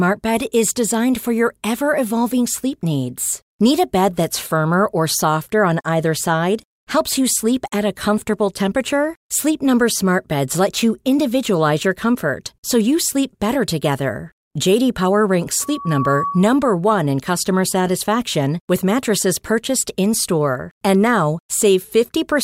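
At 15.61 to 16.64 s, loudspeaker feedback squeal: the microphone-speaker loop runs away at 1.1 kHz, swelling within half a second to speech level, a horizontal spectrogram line.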